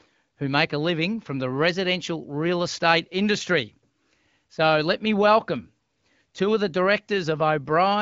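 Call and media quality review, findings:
No faults found in this speech recording. The AMR wideband (HD Voice) codec path is audible as light coding texture consistent with one of its upper rates, with nothing above 7.6 kHz.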